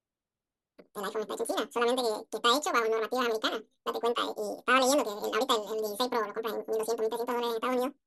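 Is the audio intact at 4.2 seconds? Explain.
No, audio read two samples at a time runs throughout, so at 4.2 s the speech plays twice as fast and an octave higher.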